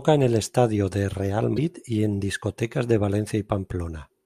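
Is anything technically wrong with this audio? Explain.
Yes. The speech has one fault, damaged data in a compressed stream. It runs from about 1.56 to 1.59 s, just before "y en discotecas de". Part of the coded stream there is corrupt. The bytes may be lost, zeroed or overwritten. The decoder cannot read those frames properly. It loses sync and hunts for the next valid frame header. What comes out is a brief chirp or squawky blip, about 30 ms long, breaking into the speech.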